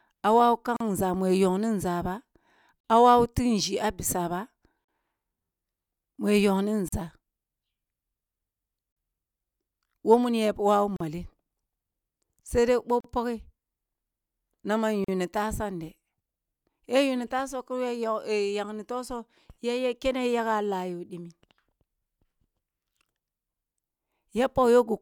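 At 0.76, 2.80, 4.84, 6.88, 8.92, 10.96, 13.00 and 15.04 s, the speech drops out for 40 ms. These are gaps at a join of encoded pieces, recurring about every 2 s. The audio was encoded in short sections and butted together untrimmed. Each section keeps the encoder's leading silence and padded final frame. Each gap has smeared edges. Then the speech resumes exactly where it stopped.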